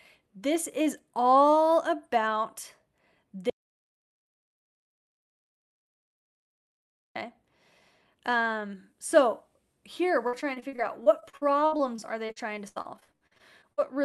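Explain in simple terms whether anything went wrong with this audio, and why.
Two things go wrong in this speech. From 3.50 to 7.16 s the sound stops dead and comes back abruptly, with about three and a half seconds of total silence, not even the faint background hiss. This is an audio dropout to silence. The likely cause is that the input was briefly lost, perhaps through a loose connection or an accidental mute, while recording carried on writing nothing but silence. Whatever was said then is gone.

From 10.27 to 13.79 s the voice turns choppy and robotic, stuttering with pieces missing. This is repeated packet loss. The audio travelled over a call connection in small chunks, and here chunks went missing again and again, leaving 27 holes, the longest about 78 ms. Each hole was patched by stretching the sound just before it, so roughly a quarter of this stretch is filler rather than real speech.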